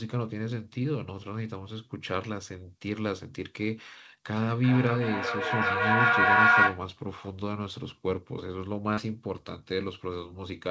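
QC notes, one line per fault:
4.35 to 6.88 s, feedback howl: a tone near 1.5 kHz builds over the speech, peaking at about 8 dB above it and pulsing roughly every 400 ms, the delay of a microphone-to-loudspeaker loop gaining level on each pass. Unlike a steady electrical whine, it swells and pulses.
8.94 s, short concealed packet loss: about 40 ms of audio failed to arrive, and the receiver bridged roughly 32 ms by extending the preceding sound before blending back, leaving a brief smear. It is a single short glitch, not the sustained cyclic build of feedback, and sits within a call path already band-limited to 8 kHz.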